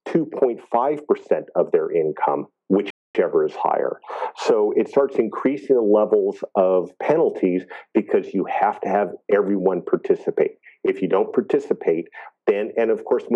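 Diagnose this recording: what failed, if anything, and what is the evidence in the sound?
Playback stall at 2.90 to 3.15 s: the sound drops to silence mid-flow for 0.24 s, then resumes, likely from a starved or blocked player.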